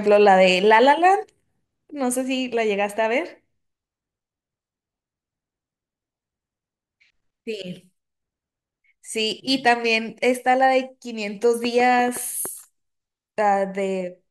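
A speech recording carries a train of clicks between 11.65 and 12.47 s: roughly seven sharp ticks at about 6.2 per second, spaced unevenly and peaking around 5 dB above the surrounding sound. They are likely caused by electrical interference from nearby equipment or a faulty connection or power supply. On a spectrogram they show as thin vertical broadband lines; on the waveform, as narrow, similar-looking spikes standing proud of the speech envelope.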